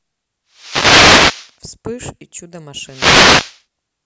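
Wireless microphone noise hits occur from 0.51 to 1.56 s and again from 2.82 to 3.62 s, each a swish of static over the speech lasting roughly a second. Both point to an analogue FM radio link fading as reflected copies of the transmitted signal arrive out of phase and partly cancel. With less signal reaching the receiver, its own hiss rises until the signal recovers, so the burst swells and then clears.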